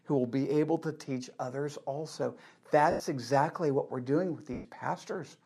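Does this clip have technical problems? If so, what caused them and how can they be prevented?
Yes. At 2.91 to 3.00 s and 4.53 to 4.65 s the speech smears into a brief noisy hiss that fades, from lost LE Audio frames that the decoder papered over by repeating the last spectrum. Keeping the Bluetooth link strong and uncontested, with a shorter distance and less 2.4 GHz interference, would prevent these dropouts.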